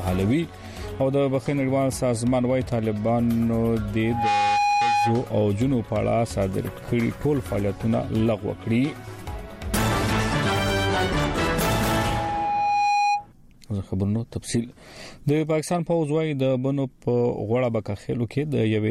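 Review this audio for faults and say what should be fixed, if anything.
Loudspeaker feedback squeal at 4.03 to 5.33 s and 11.37 to 13.27 s: a steady 823 Hz tone that swells quickly the first time and slowly the second, ending a few dB above the sound, because the microphone's loop through the speaker exceeds unity gain there. Lower the gain, move the microphone off the speaker's axis, or notch 823 Hz.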